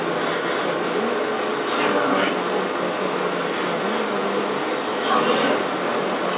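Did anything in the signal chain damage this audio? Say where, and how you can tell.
Yes. The other side's voice leaking through runs for the whole clip, from 0.0 s to 6.4 s, in the call processing stage. A second talker runs alongside the speech throughout, roughly 10 dB louder than it. The likely cause is an echo canceller that failed to subtract the far end's loudspeaker playback from the microphone signal. The residual then passed through the G.711 path, which band-limits everything to 4 kHz.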